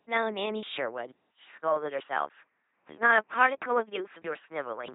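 Throughout, the speech carries heavy LPC-10 vocoder damage: a buzzing, mechanical robot voice with nothing above 3.8 kHz, consistent with a 2.4 kbit/s parametric coder. At 1.12 s, a 200 ms silence is followed by narrower, boxier sound cut above 3.4 kHz, a level shift of about 5 dB and a faint new noise floor, likely from the input switching to a poorer device.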